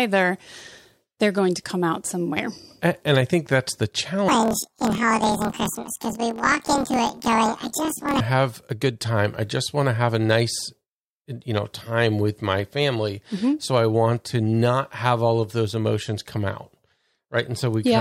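A speech clip in which the section from 4.29 s to 8.21 s, between "I think that's the" and "have a good time", is affected by planar audio read as interleaved. Each 26.12 ms block of all-left then all-right samples is read as alternating pairs, so every block plays twice at double speed. The result is speech an octave high with a flutter at 38.3 Hz, the block rate.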